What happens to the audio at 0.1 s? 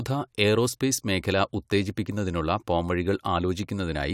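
At 0.1 s the speech is intact, with no dropout, click, distortion or other fault.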